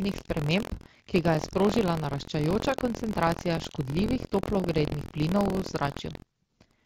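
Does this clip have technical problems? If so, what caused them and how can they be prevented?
Yes. Buffer tearing runs through the whole clip as a steady robotic rattle at about 43 Hz, which fits a 1024-sample buffer. The writer and reader have slipped, so a small slice of each period replays audio roughly a tenth of a second old, with hard joins. Unlike dropouts, it buzzes only while sound is present. Keeping the write pointer safely ahead of the hardware read position, with adequate buffer headroom, prevents it.

AMR bit errors make the speech turn hoarse and gargly from 2.67 to 2.79 s, a span that fits about five frames. Flipped low-priority bits, at a rate of a few percent, misplace the excitation pulses and skew the fine parameters while pitch and level hold. Unlike the light, clear-sounding 12.65 kbit/s wideband coding, it appears abruptly and only briefly. Stronger channel protection or a better radio link prevents it.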